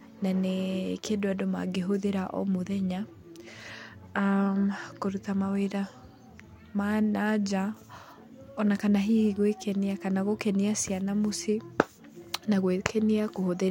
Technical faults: none

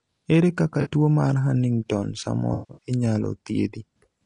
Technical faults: low-delay AAC compression; AAC frame loss with concealment

